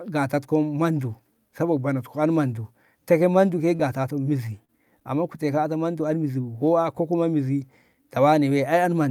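Short concealed packet loss at 3.75–3.82 s and 4.65–4.71 s: about 40 ms of speech arrived too late each time, so the receiver extended the preceding sound, leaving a brief smear.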